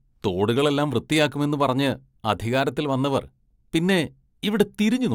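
A short recording of speech with no technical fault audible anywhere in it. Nothing in it needs a time or a cause to be pointed out.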